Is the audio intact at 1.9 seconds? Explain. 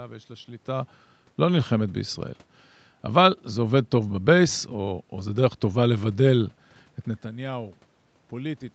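Yes, the audio is intact at 1.9 seconds, with the speech passing through the call path cleanly and only the usual room noise and band-limited call sound present there.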